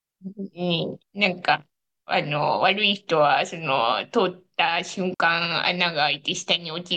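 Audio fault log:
5.14 to 5.20 s, digital wireless dropout. The speech cuts to near silence for 60 ms, then returns. The receiver lost too much data from the wireless link and muted itself with a very short fade. So the gap is a clean hole, with no noise burst at either edge.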